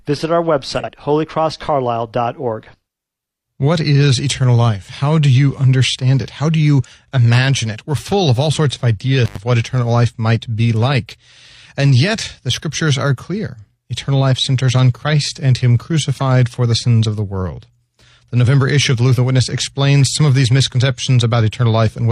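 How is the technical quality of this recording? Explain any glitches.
The recording has two audible glitches.

Frames out of order, 0.78 to 0.89 s: two adjacent 46.4 ms blocks were decoded swapped, giving a brief garbled flutter.

Intermittent contact, 9.25 to 9.38 s: a loose connection opens for about 79 ms, so the sound drops out, with crackle at both edges.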